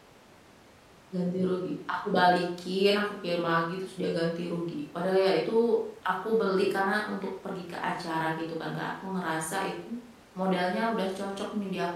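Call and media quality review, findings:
No faults found: the speech signal is continuous throughout, with nothing in the audio pointing to a problem in capture, processing or transport.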